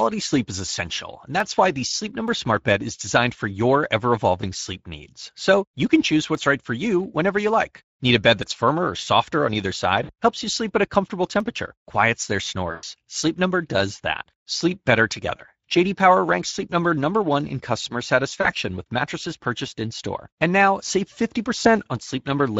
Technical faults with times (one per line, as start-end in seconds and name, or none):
0.00-22.59 Speex codec
1.40 dropped samples
2.28 dropped samples
6.35 dropped samples
8.43 dropped samples
10.03-10.10 VoIP packet loss concealed by the speech codec
11.40 dropped samples
12.71-12.84 VoIP packet loss concealed by the speech codec
13.23 dropped samples
15.37-15.41 VoIP packet loss concealed by the speech codec
18.41-18.50 VoIP packet loss concealed by the speech codec
21.62-21.67 VoIP packet loss concealed by the speech codec